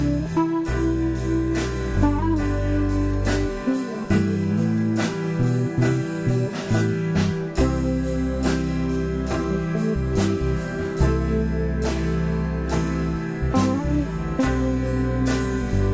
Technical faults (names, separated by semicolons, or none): none